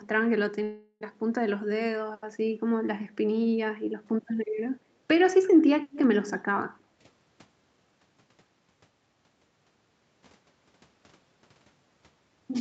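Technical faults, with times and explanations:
0.63 to 1.03 s, long network dropout: about 0.4 s of sound goes missing. The gap is filled with a fading buzz, then brief silence. Likely packet loss on the network.
5.91 to 5.98 s, echo leak: a faint delayed copy of the speech returns about 237 ms later, roughly 15 dB down. Likely incomplete echo cancellation at a loudspeaker end.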